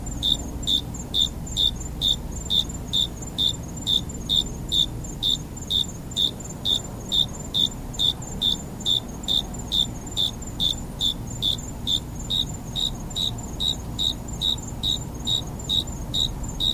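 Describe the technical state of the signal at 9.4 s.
At 9.4 s the signal is intact, with no fault audible at that point.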